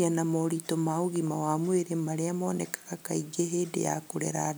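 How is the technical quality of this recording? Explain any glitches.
No technical faults can be heard in this speech recording. There are no glitches to explain.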